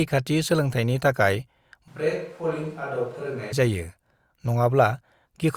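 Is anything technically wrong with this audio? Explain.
Yes. From 1.88 to 3.52 s, just after "सोलोंथायनि थाखाय", the speech suddenly turns roomy and hollow, thinner in the bass and roughly 10 dB quieter, with background noise rising to around 30 dB below the speech. At 3.52 s it snaps back. This is a switch to a distant microphone, likely because the close microphone dropped out and a farther pickup such as a camera mic was used, capturing more room reflection and ambient noise.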